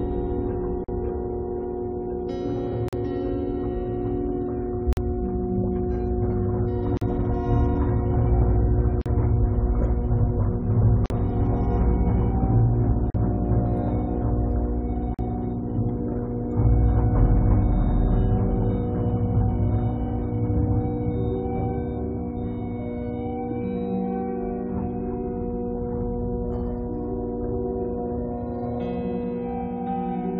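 At 0.84, 2.88, 4.93, 6.97, 9.01, 11.06, 13.10 and 15.14 s, a gap at a join of encoded pieces cuts a 43 ms silence into continuous sound. Separately encoded segments were joined with their start-up delay and last-frame padding untrimmed. Each dropout has smeared edges before the sound resumes where it stopped.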